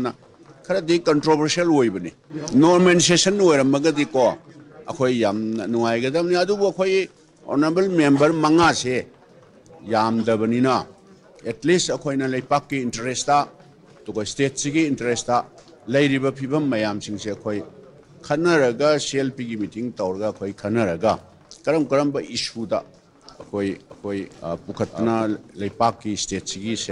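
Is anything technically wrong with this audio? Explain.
Yes. A doubled audio track runs from 23.90 to 25.24 s: a second copy of the sound trails about half a second behind, roughly 5 dB quieter, likely from a second, slower capture path. The copy is full-band with no room colour, and it starts and stops abruptly.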